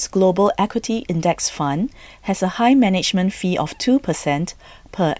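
A speech recording with nothing technically wrong with it.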